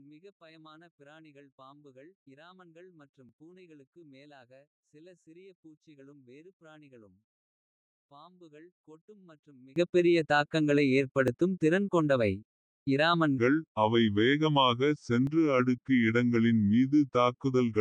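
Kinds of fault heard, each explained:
One channel inverted: Through 9.76 s the speech drops by about 29 dB in mono, leaving a faint residue, likely from one channel's reversed polarity.
Audio missing between chunks: Brief skips at 3.29, 11.28 and 15.27 s each lose a few milliseconds, likely from gaps between 4-second processing chunks.
Section at the wrong speed: From 13.38 s to the end, speech runs at 0.82 times speed, about three semitones deeper and slower, likely from a mismatched playback clock.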